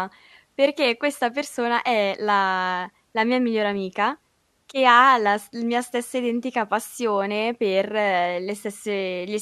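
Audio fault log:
No fault is heard in this speech recording.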